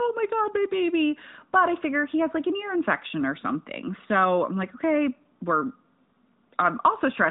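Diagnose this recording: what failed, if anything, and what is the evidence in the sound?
Nothing in this speech recording has failed; no stage of the chain shows a fault. The audio has passed through the AMR narrowband mobile codec, so nothing above 4 kHz is present and there is light codec coloration, which fits the codec's highest-rate 12.2 kbps mode.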